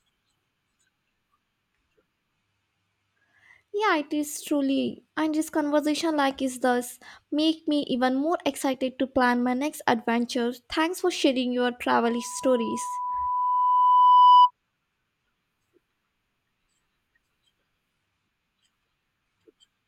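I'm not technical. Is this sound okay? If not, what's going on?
No. There is loudspeaker feedback squeal from 12.04 to 14.51 seconds. A microphone was picking up the very loudspeaker it was feeding, so the sound kept going around that loop and getting louder each trip. One pitch, a steady high tone at 993 Hz, grew on its own over about two seconds until it rang out much louder than the speech, before it stopped at 14.51 seconds.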